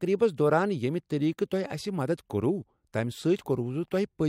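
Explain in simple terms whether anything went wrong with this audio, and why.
Clock slip clicks run from 0.34 s to 3.93 s: faint, evenly spaced ticks roughly every 0.4 seconds, around ten in all, sitting under the speech. The likely cause is two pieces of equipment each keeping their own time, one running slightly fast, off by roughly 70 parts per million. That tiny drift builds up until a single sample has to be skipped or doubled, and each of those jumps makes a small tick.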